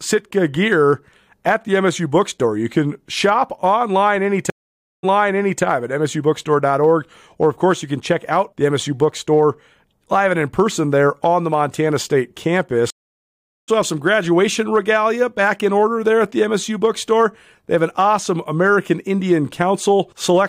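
At 4.5 s the speech cuts out for 531 ms, then resumes 597 ms earlier, repeating material until 5.63 s. At 12.90 s a 775 ms silence skips about half a second ahead, ending at 13.69 s. Both are stream reconnects, where the connection dropped and a fresh decoder restarted mid-stream.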